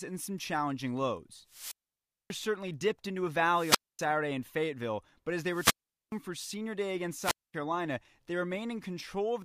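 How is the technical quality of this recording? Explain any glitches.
The recording has four wireless microphone squelch dropouts. At 1.48–2.38 s, 3.46–4.07 s, 5.46–6.19 s and 7.20–7.54 s, the radio signal fades. Hiss rises, then the receiver's squelch mutes the output for about 590, 245, 420 and 230 ms. Then the speech returns.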